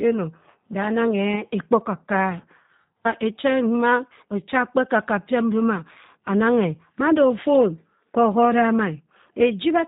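From start to finish the speech carries G.729 codec damage, plainly audible. Nothing above 4 kHz survives, and the voice sounds rough and synthetic because it is rebuilt from a filter, pitch predictor and sparse pulses, which fits an 8 kbit/s stream. A simple low-pass would leave the voice smooth rather than buzzy.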